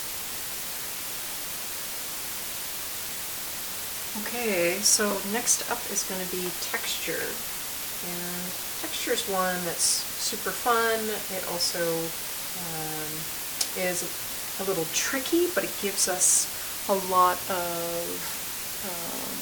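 From start to finish the audio carries low bit depth with dither: it has only about 5 bits, and added dither turns the rounding error into a steady white hiss nearly as loud as the sound itself. Undithered truncation would give gritty distortion that follows the signal.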